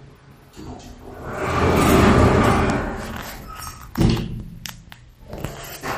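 A recording of sounds, swirly and watery throughout: a spectrogram shows a hard ceiling at 15.2 kHz with flickering gaps below, likely MP3 compression at a low bitrate, around 48 kbps.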